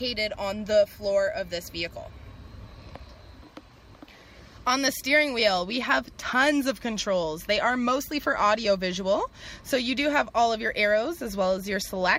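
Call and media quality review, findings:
No faults found on review.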